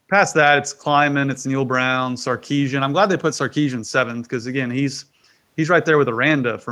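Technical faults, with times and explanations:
No technical faults can be heard anywhere in this recording.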